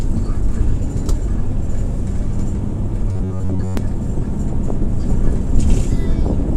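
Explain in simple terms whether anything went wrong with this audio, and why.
Something does go wrong between 3.12 and 3.77 s: the sound takes on a rigid, metallic buzz pitched at about 94 Hz, a fault called robotic sound from repeated short buffers. The likely cause is new audio arriving too slowly, so the playback software keeps repeating the last tiny slice, roughly 11 ms long, while the real audio is skipped. That repeat rate sets the buzz, and most of that stretch is made of repeats.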